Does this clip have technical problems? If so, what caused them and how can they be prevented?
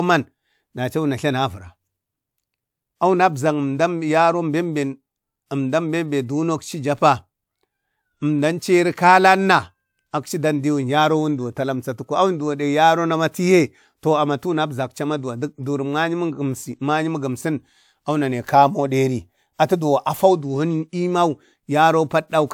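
No, nothing in this speech recording stood out as a technical problem on listening, so there is nothing here to trace to a cause or guard against.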